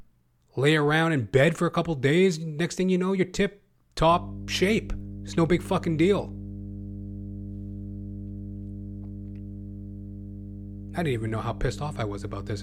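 From 4.11 s, just after "you know you're tip", mains hum enters and stays until the end of the clip. It is a steady low tone at 50 Hz with some low harmonics above it. It sits roughly 15 dB below the speech, so it runs under the speech and fills the pauses. The cause is power-line interference leaking into the signal path, from a ground loop or a nearby transformer.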